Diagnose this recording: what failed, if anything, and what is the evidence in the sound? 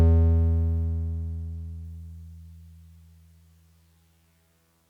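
Between 0.85 and 1.85 s the highs dull: channel delay (comb filtering) in the buffer, one channel a sample late, cancelling near 20 kHz in mono.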